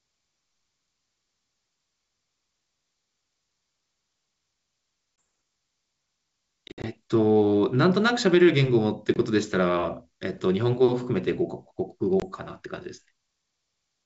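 Packets of the ADPCM speech stream go missing four times: about one packet (20 ms) at 5.21 s, roughly five packets totalling 100 ms scattered across 6.68 to 6.86 s with a longest run of 60 ms, and single 20 ms losses at 9.14 s and 12.20 s. Each gap is filled with silence, and the receiver's adaptive predictor and step size drift away from the sender's. You hear abrupt hard-edged holes, then speech resuming with brief, slight distortion until the decoder resettles.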